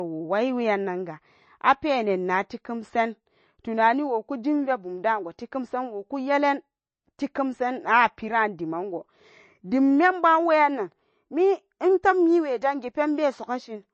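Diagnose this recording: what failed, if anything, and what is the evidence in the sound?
The codec stage shows plainly audible MP3 compression throughout: nothing above 8.3 kHz, with a watery, swirling texture as weak frequency lines drop in and out between frames. That fits a starved bitrate near 32 kbps. The on-off swirl separates this from a simple band-limited line, whose treble loss would stay steady. The cause is likely low-rate MP3 encoding.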